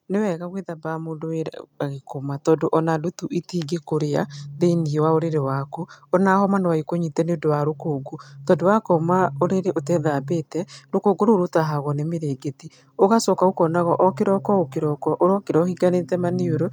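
From 0.81 s to 9.79 s, voice and background swell together by about 8 dB: automatic gain rising, as gain control slowly lifts a quiet input.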